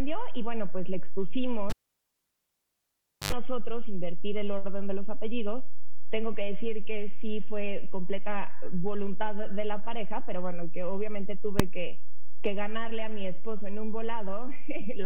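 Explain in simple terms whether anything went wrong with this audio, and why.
Two things went wrong. From 1.70 to 3.32 s there is a cable pulled and plugged in: a pop, about 1.6 s of near silence, an 83 ms burst of 50 Hz mains buzz as the plug's tip touches, then another pop. That buzz sets it apart from a simple dropout.

At 11.60 s, invalid numbers at full scale give one sharp bang. A calculation broke down, and a block only about 1.5 ms long was pushed to the loudest possible value. It is a single instant with no hum, unlike the cable fault.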